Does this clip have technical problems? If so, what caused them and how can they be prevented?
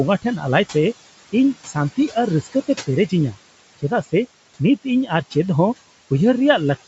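Yes. Noise suppressor artifacts run through the whole clip. The suppressor pulls the room noise, which sits about 17 dB below the speech, down by about 17 dB between phrases and releases it under speech. A gentler suppression setting or a quieter room would prevent this.

Speech cut by the noise suppressor occurs from 2.43 to 2.68 s. The suppressor treats part of the speech as noise and turns it down by up to about 14 dB, so roughly a tenth of a second sounds swallowed. A less aggressive suppressor or a closer microphone would prevent this.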